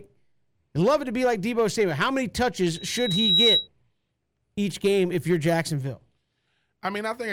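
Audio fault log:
2.74 to 3.68 s, loudspeaker feedback squeal: a 3.9 kHz tone swells up over most of a second until it sits a few dB above the speech. The mic is hearing its own loudspeaker, and at that one frequency the loop gain tops one, so the tone keeps feeding itself.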